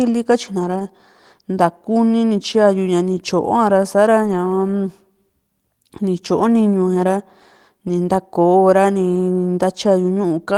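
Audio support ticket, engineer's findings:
Lost packets rebuilt from error correction at 0.59–0.81 s, 4.23–4.33 s and 9.15–9.17 s. Speech continues with no gap, but those stretches turn rough and noisy. Durations of 120, 60 and 20 ms fit six, three and one 20 ms Opus packets. Decoder is playing low-bitrate in-band FEC copies carried in the following packets. Unlike plain loss concealment, there is no dropout, smeared repeat or fade, only degraded real content.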